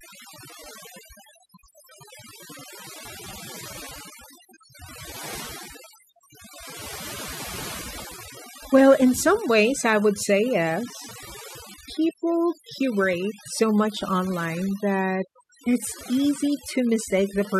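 Overdone noise removal throughout: an over-strong noise reducer cuts bands near its noise estimate, so background becomes twinkling near-silence.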